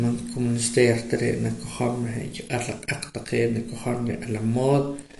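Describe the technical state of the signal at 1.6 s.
At 1.6 s the speech carries MP3 compression damage that runs through the whole clip: nothing sounds above 11.3 kHz, and weak frequency lines flicker between frames into a watery swirl. That swirl separates it from a plain low-pass filter. A starved bitrate near 48 kbps is the likely cause.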